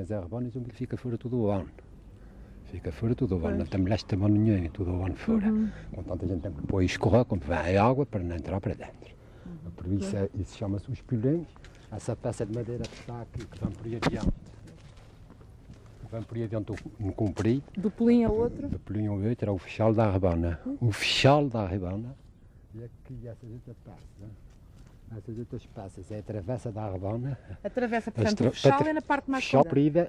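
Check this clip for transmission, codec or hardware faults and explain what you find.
One fault turns up, right at the end of the clip. From 29.59 to 29.63 s a short glitch breaks through the sound, lasting under 50 ms. This is damaged data in a compressed stream. Part of the encoded data there was corrupted, so the decoder misread those frames, lost sync, and skipped forward to the next valid frame header. That produced the brief glitch.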